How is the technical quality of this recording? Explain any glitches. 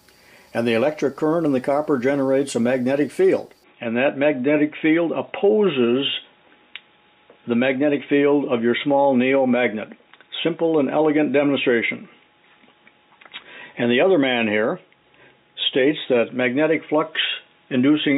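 The recording has one clear fault. From 3.64 s to the end, the input likely switched to a poorer device; the band now stops near 3.8 kHz, turning the sound dull and boxy, with faint new background noise and no gap.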